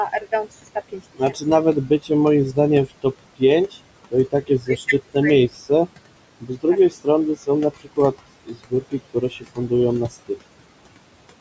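Right through the clip you get noise suppressor artifacts: the room noise gets pulled down by about 21 dB between phrases, so it pumps underneath. On top of that, speech gets cut by the noise suppressor in six stretches, at 0.2–2.11, 2.52–3.77, 4.11–5.16, 5.49–5.88, 6.41–8.15 and 8.46–9.71 s. Soft consonants and word endings get mistaken for noise and ducked by about 20 dB (about 15 dB in the short one), so they sound swallowed. That adds up to roughly 2.5 seconds across the six stretches.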